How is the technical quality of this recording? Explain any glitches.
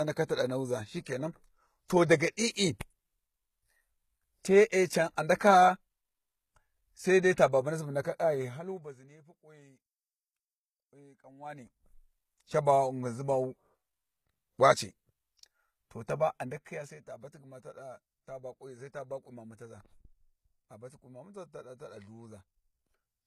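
The recording has one fault, present for the whole clip: low-bitrate audio saved at a high bitrate. The speech carries the artefacts of heavy data reduction, even though the file is a large, high-rate MP3. This likely comes from an earlier encode at a very low rate, consistent with HE-AAC at around 20 kbit/s. The MP3 pass at roughly 313 kbit/s only preserved those losses; it cannot restore detail the first codec discarded.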